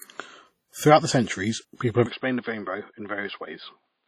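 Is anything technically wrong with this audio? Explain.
Yes. The speech carries two faults.

From start to end there is heavy codec damage, likely from WMA compression at a rate that fits roughly 32 kbps. A transform codec of this kind codes audio in long blocks, so quantisation noise smears across tens of milliseconds around each sound, and at a bitrate this low the weaker spectral lines are discarded. The result is ringing, washy speech with a hiss that swells and fades with the signal, and nothing above 14.7 kHz.

From 2.06 s to the end, the input is switched to a poorer device, likely a change to another microphone or a headset's call profile. The new path passes a narrower band, with nothing above 4.9 kHz, and brings its own gain and noise floor. There is no gap at the switch. The sound abruptly loses its top end and becomes about 5 dB quieter, with a new background noise sitting well below the speech.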